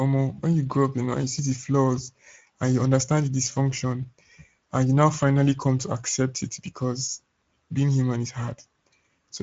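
Speech passed through the Speex codec at a mid-rate setting, which points to about 17 kbps, leaving it audibly noisy and hoarse throughout, with nothing above 7.7 kHz.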